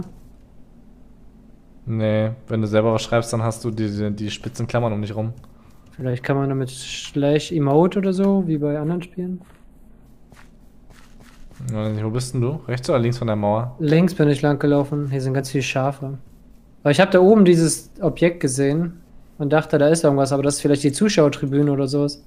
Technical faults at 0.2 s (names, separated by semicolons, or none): none